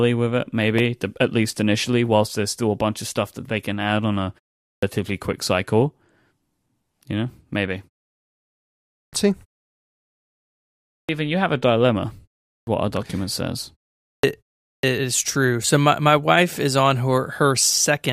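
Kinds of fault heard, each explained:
Clipped start after a pause: the output path idles during silence and must wake before passing sound again, so roughly 120 to 140 ms of speech is swallowed after each gap, at 4.70, 8.99, 10.97, 12.55, 14.10 and 14.71 s, following pauses of 0.36 to 1.6 s. On a waveform each phrase jumps from flat silence straight to full amplitude. A spectrogram shows hard vertical edges with no leading onset energy.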